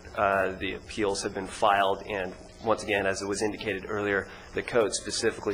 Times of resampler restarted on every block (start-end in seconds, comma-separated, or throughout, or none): none